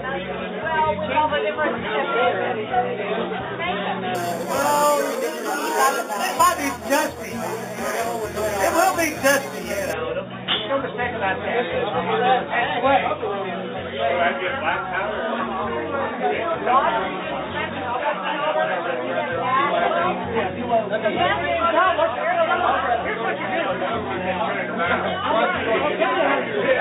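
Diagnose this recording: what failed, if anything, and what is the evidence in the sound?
Sample-format conversion: imaging from sample-and-hold upsampling, 4.15–9.93 s. Held samples taking 8 kHz to 48 kHz mirror a 4–8 kHz spectrogram band, about 13 dB down, heard as metallic fizz.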